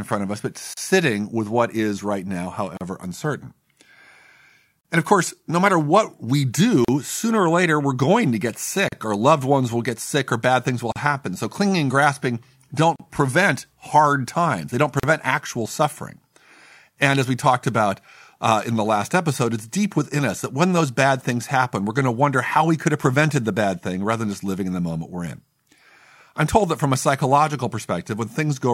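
Brief dropouts of about 37 ms cut into the speech at 0.74, 2.77, 4.81, 6.85, 8.88, 10.92, 12.96 and 15.00 s, roughly every 2 s, with softened edges. These are gaps at joins of encoded pieces, where separately encoded segments were joined without trimming the encoder's leading delay and final-frame padding.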